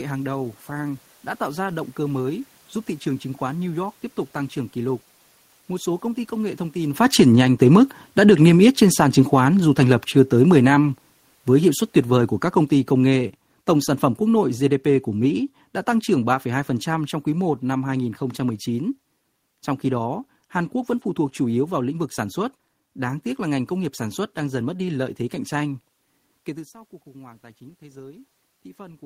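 Automatic gain falling runs from 7.01 to 18.05 s. Around 7 seconds the talker comes closer and the input grows louder. The gain control then pulls its gain down slowly by about 16 dB, so the speech and the room noise behind it sink together over those eleven seconds.

Automatic gain rising starts at 26.46 s and lasts until the clip ends at 29.05 s. Around 26.5 seconds the talker moves back, and the input drops by about 20 dB. The gain control answers by raising its gain gradually, so the voice and the background noise swell together.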